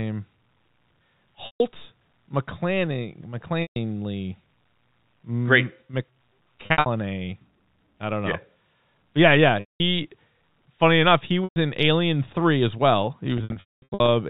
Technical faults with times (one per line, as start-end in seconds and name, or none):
1.46-1.60 packet loss with pitch repetition
3.62-3.76 packet loss with pitch repetition
6.66-6.86 packet loss with pitch repetition
9.60-9.80 packet loss with pitch repetition
11.44-11.56 packet loss with pitch repetition
13.38-14.08 packet loss with pitch repetition